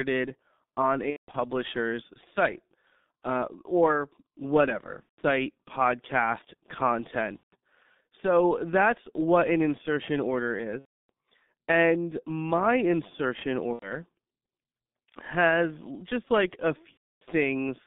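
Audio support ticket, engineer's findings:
Muffled, hoarse speech all through, band roughly 200 Hz to 3.7 kHz, consonants smeared. G.723.1 codec, heavy damage, fits the 6.3 kbit/s mode: 30 ms frames, slow-tracking voice model, nothing up top.

Fading smears: VoIP packet loss concealed by the speech codec. The decoder stretches its last pitch and filter, and the gain sinks. Hits at 1.10–1.36 s (scattered, longest gap 180 ms), 5.03–5.21 s after "uh or whatever", 7.37–7.55 s, 10.79–11.10 s, 13.73–13.93 s after "my insertion", and 16.91–17.23 s after "just like a".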